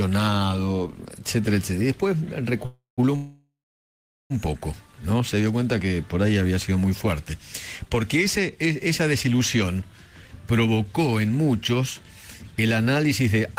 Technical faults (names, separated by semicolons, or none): call audio freeze